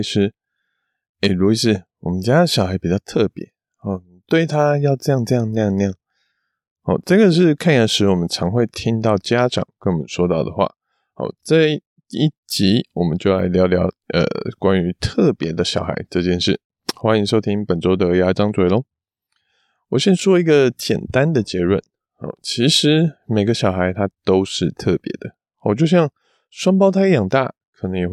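Recorded speech with no technical fault to report. Nothing in the audio calls for a time stamp or a cause.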